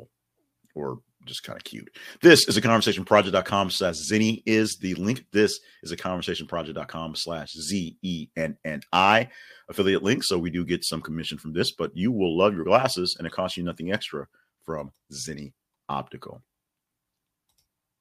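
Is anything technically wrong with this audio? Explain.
No, there are no technical faults to report here.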